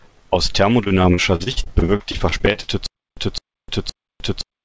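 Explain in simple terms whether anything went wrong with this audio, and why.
From 0.84 to 2.70 s the speech turns choppy and robotic, with bits missing. This is repeated packet loss: 18 small pieces of audio, none longer than 50 ms, never arrived, and each hole was filled by stretching the sound just before it.

From 2.86 s to the end, the same short scrap of about 0.21 s repeats, followed each time by about 0.31 s of dead silence, twice a second. This is stutter with silent gaps, likely from the stream stalling and replaying its last fragment while waiting.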